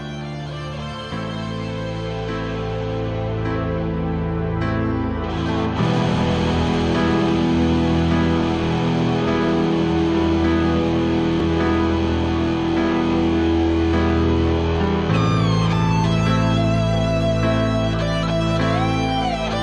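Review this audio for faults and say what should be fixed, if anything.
A single overlap between stream segments shows up at 11.40 s as a tiny skip. The timestamps of two adjacent segments, each 6.0 s long, claim the same stretch of time. The player trims that overlap, but the sound in it was never actually duplicated, so about 3 ms of real audio is discarded. The waveform jumps across the gap instead of continuing smoothly. The cut comes through as a tiny skip. To prevent it, generate segment timestamps from a single continuous sample clock so each segment begins exactly where the previous one ends.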